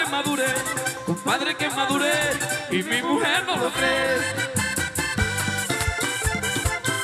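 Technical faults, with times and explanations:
No faults can be heard anywhere in the clip.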